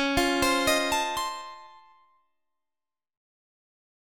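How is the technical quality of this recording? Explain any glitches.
One glitch stands out, a case of zipper noise. From 0.72 to 2.18 s the level falls by roughly 25 dB. It drops in 2 dB steps, about seven a second, with no smoothing between them. Each jump leaves a small click. A ticking zip rides on the sound as it fades.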